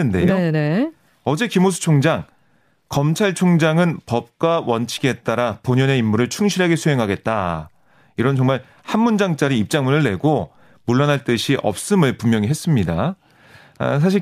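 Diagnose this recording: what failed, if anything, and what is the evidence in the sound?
Nothing in the chain audibly failed: the signal stays continuous and stable throughout, with no disturbance that points to any stage from capture through to playback.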